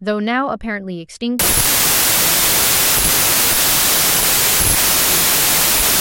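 From 1.39 s to the end, the speech collapses into loud noise with the talker faintly audible underneath, slowed to 0.75 times speed and lower in pitch. This is a wrong sample width fault: 32-bit samples read as packed 24-bit, so bytes straddle sample boundaries.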